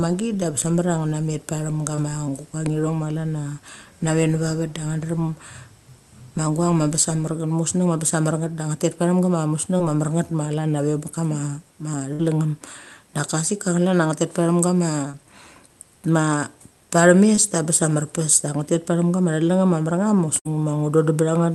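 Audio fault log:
1.95, 9.77, 15.11 and 17.35 s: short concealed packet loss. At each spot about 20 ms of audio never arrived. The receiver papered over it by stretching the sound just before, then blended back in, so you get a quick smear or wobble lasting roughly 40 ms.
12.13 to 12.21 s and 20.39 to 20.47 s: burst of packet loss. Here about 60 ms went missing in one go. The decoder carried the previous sound forward and faded it, so you hear a held buzz or dying hiss, then the audio jumps ahead with that chunk gone.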